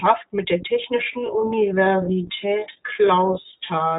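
Throughout, the speech passes through the iLBC codec: the band stops near 3.7 kHz and each frame is coded independently, giving a rough, synthetic edge, unlike the smoother murk of other narrowband codecs, which fits a 15.2 kbps, 20 ms mode. From 1.0 s, right after "mit der", to the end, a time-stretched section drops the pace to about 0.6 times speed with unchanged pitch. This was likely caused by software repeating short pieces, and it drags rather than deepening like a slowed tape.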